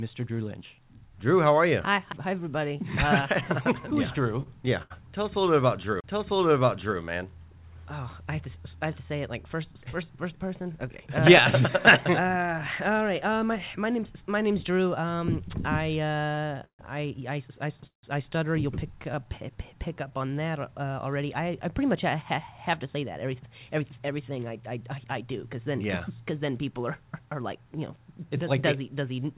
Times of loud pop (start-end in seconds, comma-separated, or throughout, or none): none